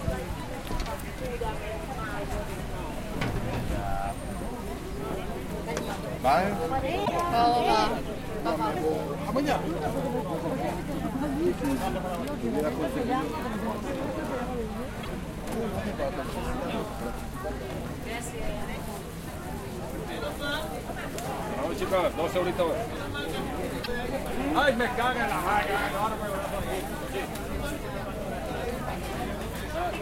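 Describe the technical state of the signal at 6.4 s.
At 6.4 s the signal is intact, with no audible technical fault at that moment.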